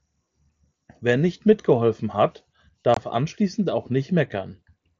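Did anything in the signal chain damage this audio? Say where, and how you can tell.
Yes. The damage is at the wireless link between headset and phone: unconcealed Bluetooth headset packet loss from 2.94 to 2.97 s. The speech drops out for about 22.5 ms with hard edges, a gap that fits roughly three lost 7.5 ms mSBC packets replaced by silence or an idle pattern. The waveform shows a flat stretch starting and ending abruptly. The spectrogram shows a blank vertical stripe across the 8 kHz wideband range, flanked by thin broadband lines at each edge.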